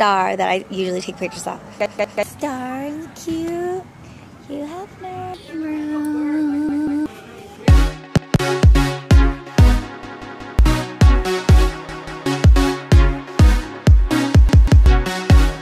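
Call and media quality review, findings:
Playback underrun, repeated buffer. The output device starved and replayed its last block instead of waiting for fresh audio. Each event sounds as a stutter: the same segment of about 186 ms repeats, with a hard join at every restart, which fits an 8192-sample buffer. Events occur at 1.86–2.23, 6.69–7.06, 8.17–8.36, 10.03–10.59, 11.89–12.26 and 14.49–14.86 s. Each has one to three extra plays and drops around 0.2 to 0.5 s of audio, about 2.3 s in total.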